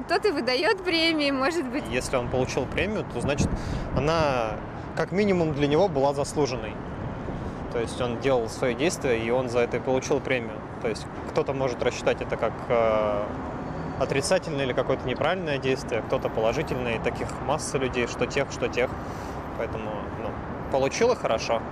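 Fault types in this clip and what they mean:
No fault types are present in this clip.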